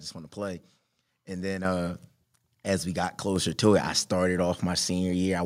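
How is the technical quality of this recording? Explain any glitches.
The recording has two abrupt level jumps where the microphone volume stepped up, at 1.65 s (about 7 dB) and 3.36 s (about 4 dB). Each time, the call software raised the input volume in a single step, so the speech and the background noise get louder together. A talker leaning closer would mainly raise the speech, and automatic gain control would usually ride the level more gradually.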